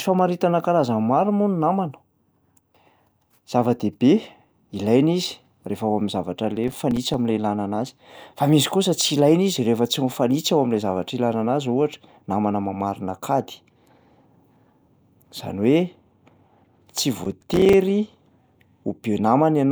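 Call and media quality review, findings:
Processor overload crackle, 6.57–7.14 s and 17.24–17.73 s: gritty tearing over the speech. Audio thread missing buffer deadlines repeatedly. Each miss drops a short block, around 5 ms, to silence with hard edges. Roughly 10 and 15 misses in the two bursts, clearing when load eases.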